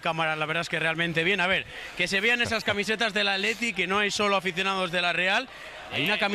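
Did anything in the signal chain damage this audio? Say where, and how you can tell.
No, nothing stood out on listening that would point to damage at any stage of the chain.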